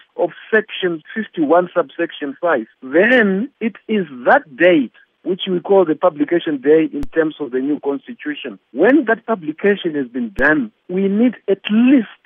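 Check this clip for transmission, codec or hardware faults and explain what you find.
Two DC steps are present, at 7.03 s and 10.39 s. At each, the waveform's zero line jumps by an offset of about -14 dBFS, then drains away through a high-pass around 5 Hz rather than holding. The sudden shift gives a low thump, and the sound carries on unchanged across it. That separates it from a dropout or digital click, which interrupt or spike the signal itself rather than displacing its baseline.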